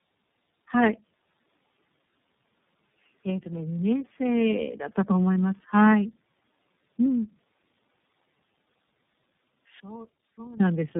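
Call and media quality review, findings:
Tandem speech coding, throughout: rough, muffled, warbly speech with no content above 3.7 kHz. The sound fits three low-bitrate speech coders in series, ending with iLBC and joined by G.711 hops. Each border decodes and re-encodes audio already degraded by the previous coder, so artefacts stack beyond what any single link produces.

One channel inverted, 9.80 to 10.60 s: speech collapses by about 26 dB to a faint residual. This is likely a polarity flip on one stereo leg, so the shared centre content cancels when the channels are summed to mono and only the inter-channel difference survives.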